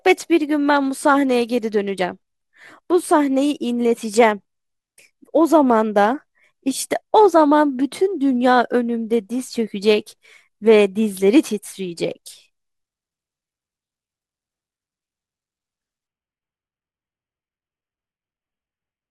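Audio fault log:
16.07–19.11 s, adaptive stream at a lower bitrate: the speech quality drops suddenly at 16.07 s and stays low to the end. There is no gap at the switch. Codec artefacts rise sharply. The player has moved to a much leaner version of the stream, which fits a step from about 96 kbit/s down to about 16 kbit/s AAC after the connection slowed.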